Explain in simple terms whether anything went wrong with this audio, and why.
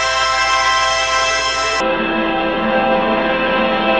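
From 1.80 s to the end, the audio suffers a stereo read as mono fault: the left and right channels, which are stored as alternating samples, get read one after another as if they were a single track. Every stretch of sound is stretched to twice its length, so it plays at half speed and drops a full octave, twelve semitones, sounding slow and deep. A faint, high-pitched mirror image of the sound also rides on top.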